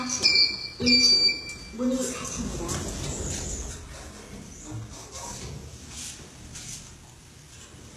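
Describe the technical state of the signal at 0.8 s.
At 0.8 s the audio carries HE-AAC compression artefacts, present across the whole clip, with the damage plainly audible. The likely cause is a low-rate HE-AAC encode, consistent with roughly 16 kbps. Only the lower spectrum seems truly coded; the treble is rebuilt by copying lower bands upward under a coarse envelope, so its harmonics misalign at the crossover. The top end sounds gritty and metallic, and nothing survives above about 12.3 kHz.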